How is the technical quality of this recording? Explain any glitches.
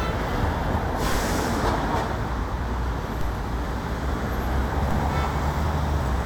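Three DC steps mar the recording, at 1.12 s, 3.21 s and 4.91 s. At each one the waveform's zero line suddenly jumps, by about -18 dBFS for the first two and about -19 dBFS for the last. The offset does not hold. It drains away through a 5 Hz high-pass. Each jump is heard as a brief low thump or click. The sound around it carries on unchanged.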